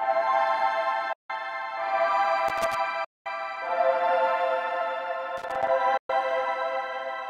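At 1.13 s the sound cuts to silence until 1.30 s, a hole of about 162 ms. It then resumes further along, as if it had kept playing unheard. This is a Bluetooth dropout. The likely cause is wireless packets arriving too late at the headphones and being thrown away. From 2.48 to 2.75 s an irregular burst of crackle and scratching appears. This is loose connector crackle: a worn or dirty contact keeps making and breaking, chopping the signal. At 3.04 s a second silent gap begins and ends at 3.26 s, lasting about 209 ms. The sound again jumps ahead when it returns. More crackle follows from 5.37 to 5.70 s, ragged and uneven in the same way. At 5.97 s the audio drops out once more until 6.10 s, a gap of about 116 ms. All three gaps fit a run of several lost packets.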